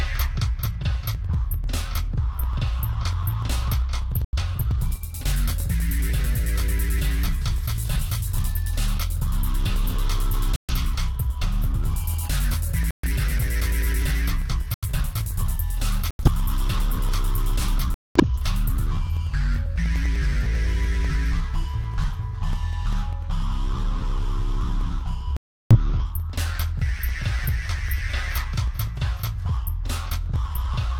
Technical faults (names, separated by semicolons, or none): periodic USB or driver dropouts; corrupt frame muted